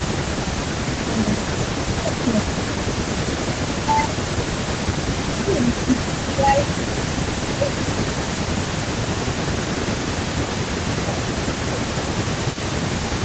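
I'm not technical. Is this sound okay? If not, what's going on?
No. When both people on the call talked at once, the system likely couldn't tell this speaker apart from the other side's sound and turned everything down. This is speech suppressed in double talk: the voice dips, thins or drops out from 0 to 0.53 s, 1.01 to 1.51 s, and through most of 1.83 to 12.14 s.

The other person was likely using a loudspeaker, and their system failed to fully remove what its microphone picked up. This is an echo leak: a faint, delayed copy of the voice, arriving about 0.4 seconds late, comes back at 1.53 to 2.13 s, 4.21 to 5.4 s, 5.71 to 5.89 s, and from 6.66 s to the end.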